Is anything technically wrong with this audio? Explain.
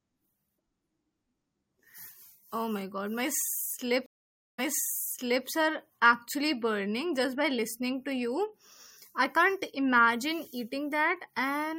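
Yes. From 4.06 to 5.46 s there is a stream reconnect. The connection dropped, leaving a 0.52 s flat, empty gap in the waveform. A restarted decoder then replays 0.88 s of earlier speech before "are actually burning just".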